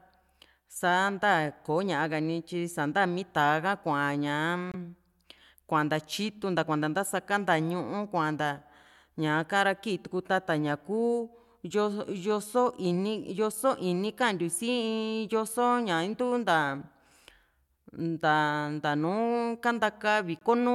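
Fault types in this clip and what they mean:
Bluetooth dropout: the speech cuts abruptly to silence for 23 ms at 4.72 s and 20.39 s, then resumes as if it had played on, which fits one audio frame likely lost over the wireless link. Waveform: flat notches. Spectrogram: thin, empty vertical stripes.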